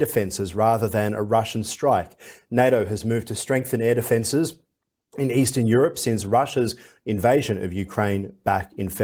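The speech carries no technical faults, and the Opus voice compression in the chain leaves only light coding traces while keeping the full audio band, which fits a hybrid setting running at around 24 kbps.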